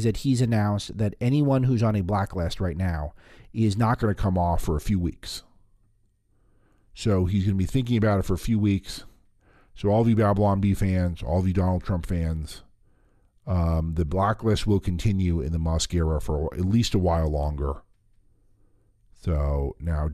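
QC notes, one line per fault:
4.03 to 20.13 s, section at the wrong speed: from just past the four-second mark to the end, the speech drops to about 0.89 times its proper rate, and because speed and pitch are tied together here, everything sits roughly two semitones lower and sounds slowed and heavier. That shift arriving partway through the clip points to a likely clock or sample-rate mismatch when the later section was edited or played back.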